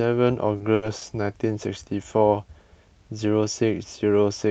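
A speech recording over a call path band-limited to about 8 kHz shows three short stalls from late packets, at 0.57 to 0.62 s, 0.74 to 0.84 s and 0.98 to 1.03 s. Each time the jitter buffer ran dry and the receiver held the last sound, for 30, 80 and 30 ms, before resuming with nothing lost.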